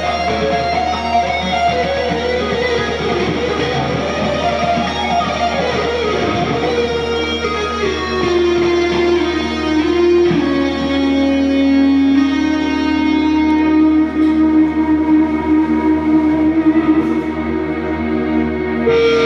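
From 0.09 s to 10.19 s, something in the chain, likely interference from nearby equipment or a faulty connection or power supply, keeps injecting short pulses into the signal. The result is a train of clicks: about thirty near-identical ticks arriving at an uneven pace, averaging roughly 3.3 per second. They peak at around the level of the sound itself, and are heard as popping and ticking over it, and they stay audible in the pauses too.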